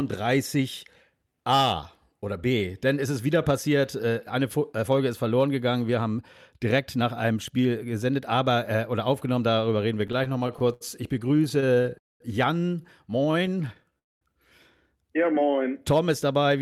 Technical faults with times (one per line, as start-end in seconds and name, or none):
10.07-11.86 repeated stalls (stutter)
11.98-12.22 call audio freeze
13.25-13.95 jitter buffer slow-down
13.47-13.93 repeated stalls (stutter)
13.99-14.23 call audio freeze
15.26-15.64 jitter buffer slow-down